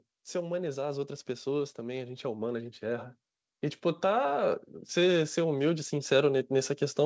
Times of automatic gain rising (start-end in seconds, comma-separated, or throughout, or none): 0.20-3.10, 3.81-7.05